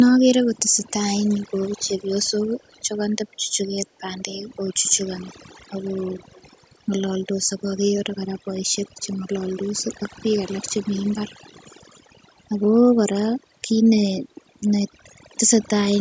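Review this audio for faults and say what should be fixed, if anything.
Throughout the clip the background drops to near silence dotted with twinkling specks. This is overdone noise removal: an overly strong noise reducer pushes single frequency bands far down whenever they sit near its noise estimate, and quiet parts of the speech go with them. A gentler reduction setting on the noisy recording would prevent this.

From 0.71 to 0.87 s and again from 6.19 to 6.6 s, a delayed copy of the speech trails 100 ms behind. It is very faint in the first stretch and somewhat stronger in the second. This is an echo leak, likely caused by a loudspeaker on one side of the call whose echo canceller let part of its microphone pickup get sent back. A headset or better echo cancellation on that side would stop it.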